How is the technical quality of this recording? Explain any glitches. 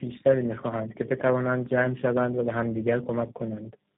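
Quality is poor because of one fault that runs through the whole recording. Tandem speech coding is present from start to finish. The speech seems to have passed through three narrowband speech codecs in a row. Each one re-encoded the previous codec's already damaged output. The errors stacked up. The speech sounds rough, muffled and warbly, with nothing above 3.8 kHz.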